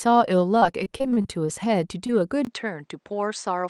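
From 0.55 to 1.50 s the speech turns choppy and robotic, with ten short holes, the longest 34 ms, making up about a fifth of that stretch. This is repeated packet loss: each missing piece was patched by extending the preceding sound, then another gap arrived soon after.

Overlapping it, from 0.66 to 1.69 s, the speech drags slightly, running at 96% speed with no pitch change and 43 ms added overall. That is a jitter buffer slow-down, where the receiver repeated tiny pitch cycles or pause fragments to rebuild its reserve of incoming audio.

Between 2.07 and 2.11 s there is a brief smear where 20 ms of audio never arrived in time. This short concealed packet loss was bridged by continuing the last sound, shaped from its pitch or as noise, before blending back into the real signal.

At 2.45 s a 20 ms silence falls, and from there to the end the speech sounds duller, with nothing above 8.6 kHz. 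The loudness stays about the same, with a different background noise floor roughly 50 dB down. The likely cause is the input switched to a poorer device with a narrower band.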